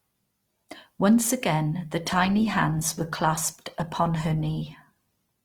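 At 2.04 s, after "again the", the adaptive stream drops to a lower bitrate without a gap, from Opus 64 kbit/s to Opus 16 kbit/s. Codec artefacts rise abruptly and stay raised to the end.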